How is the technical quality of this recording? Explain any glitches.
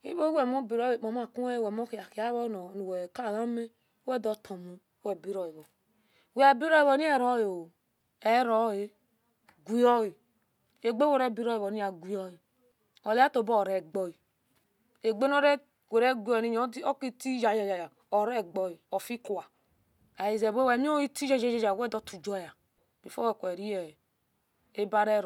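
The speech recording has no audible technical faults anywhere.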